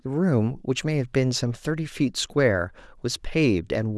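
No technical faults can be heard anywhere in the speech recording; the signal stays steady and continuous throughout.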